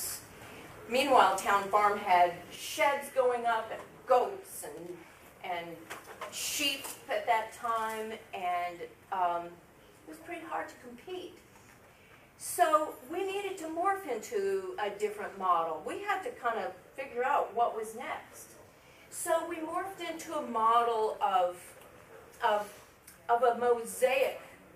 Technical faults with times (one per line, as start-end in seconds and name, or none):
2.56-24.75 one channel drops out